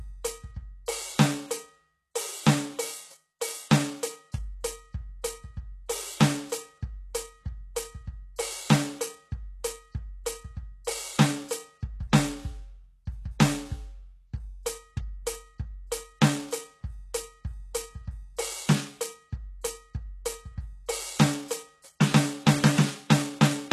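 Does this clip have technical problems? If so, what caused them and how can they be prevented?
Yes: throughout the music there is plainly audible HE-AAC compression damage, likely from encoding at a very low bitrate, consistent with about 16 kbps. The treble is synthesised by copying lower bands upward, so the treble sounds gritty and metallic. A spectrogram shows repeated, blocky high-band patterns and nothing above 12.3 kHz. To prevent it, encode at a higher bitrate or use a codec setting that keeps the full treble.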